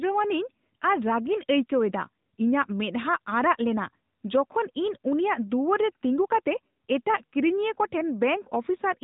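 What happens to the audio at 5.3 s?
At 5.3 s you're hearing the AMR narrowband mobile codec, which runs through the whole clip. Nothing above 3.8 kHz survives, and the low-bit vocal-tract model with pulse excitation makes the speech plainly buzzy and synthetic, even at its second-highest mode of about 10 kbps.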